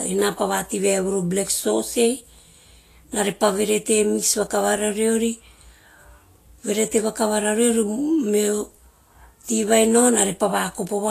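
Throughout, the speech stops dead at 14.2 kHz and keeps low-bitrate artefacts. This is likely low-bitrate audio saved at a high bitrate, fitting an earlier Vorbis encode.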